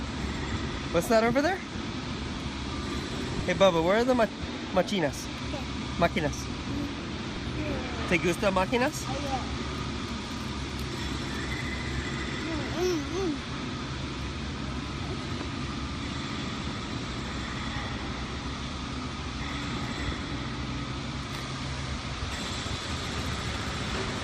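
An overlap between stream segments is at fault: the time stamps of consecutive segments, which fit a segment length of about 1 s, overlap, and the player discards the overlapping stretch even though that audio was never duplicated. Roughly 10 to 16 ms of sound disappears each time and the waveform jumps, heard as a click or tiny skip at 0.41, 1.41, 2.40, 3.40, 4.39, 5.38 and 7.36 s, following the once-per-second segment rhythm.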